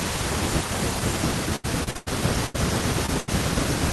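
From 1.21 s to the end, this speech clip plays back at 0.822 times its proper speed, most likely because a player or editor ran that section against the wrong clock. This section at the wrong speed shifts pitch and tempo together, so the voice drops by roughly three semitones and drawls compared with the opening second. Between 1.56 s and 2.08 s, packets were lost or arrived late repeatedly, in four separate gaps, the longest 96 ms. Each gap was patched by extending the previous sound, so nearly half of that half-second is synthetic fill and about 220 ms of real audio is gone. This repeated packet loss gives the passage a choppy, robotic character. A burst of packet loss occurs twice, from 2.46 s to 2.56 s and from 3.20 s to 3.30 s. In each case about 80 ms of audio never arrived and the receiver held the last sound while fading it. A voiced sound therefore turns into a brief sustained buzz, or an unvoiced one into a decaying hiss, and the audio then resumes with that stretch skipped. 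Between them, from 3.06 s to 3.10 s, a short concealed packet loss removes about 20 ms. The decoder extrapolated across it and blended back in, leaving only a small smear or wobble where a brief consonant may have dropped out.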